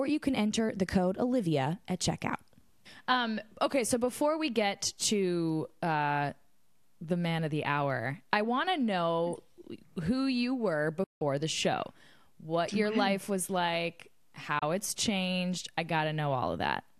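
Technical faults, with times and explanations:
11.03–11.22 s and 14.59–14.63 s, digital broadcast dropout: the receiver lost good frames and muted after "know who you were" and after "your life was like". An 8 ms fade drops into dead silence for 0.18 s and 0.04 s before resuming at "the show what your" and "it's changed I". Unlike concealment glitches, nothing is smeared or repeated, so the material is simply missing.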